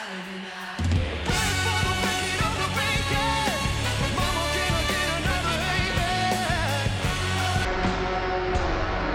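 From 7.65 s to the end, a section at the wrong speed plays at half speed, roughly ten semitones lower, likely from a clock mismatch. Pace and pitch fall together, unlike a pitch shift alone.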